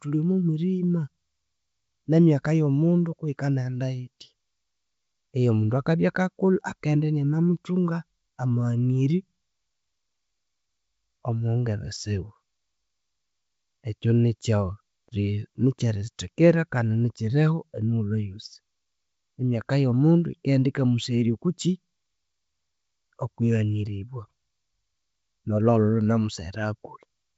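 The speech comes through G.722 wideband telephone coding, at what sounds like its full 64 kbit/s mode, with no technical faults heard.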